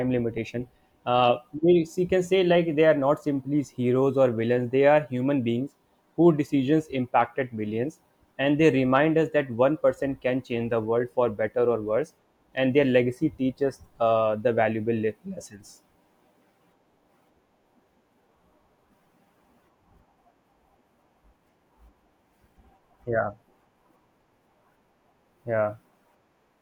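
No technical faults are audible.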